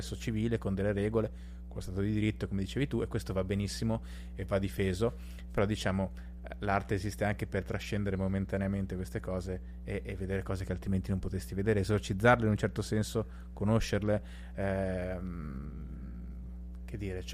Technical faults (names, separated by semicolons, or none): mains hum